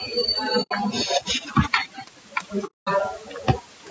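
Throughout, overdone noise removal pushes frequency bands near the noise estimate down to almost nothing, leaving a background that drops and breaks up into twinkling specks. Low-delay AAC compression is also present throughout: the speech sounds rough and grainy with noise between the harmonics, likely from AAC-ELD's short frames at a bitrate around 32 kbps. The audio carries nothing above 8 kHz, consistent with the call's band limit. At 0.62 to 0.73 s, AAC frame loss with muting zeroes about 90 ms of spectrum, so the speech fades out and back in around a soft-edged hole. A longer hole of about 210 ms follows at 2.66 to 2.88 s.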